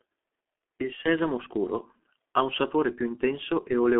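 G.723.1 codec damage runs throughout this speech clip: heavy, muffled and hoarse, with nothing above 3.8 kHz and a narrow telephone band of 250 Hz to 3.5 kHz. Its slowly updated 30 ms voice model blurs consonants, which fits a bitrate near 6 kbit/s.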